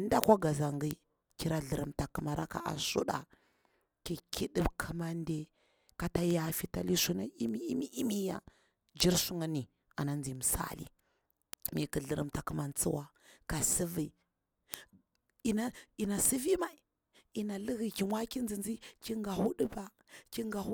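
From 0.24 s to 20.64 s the speech carries word clock ticks: a train of short clicks repeating roughly every 0.15 s, about a hundred in all. A digital link is being read by a device running on its own clock rather than locked to the sender's. The two clocks differ by something like 150 ppm, so they drift past each other steadily, and at each crossing a single sample is dropped or repeated, leaving a brief discontinuity in the waveform.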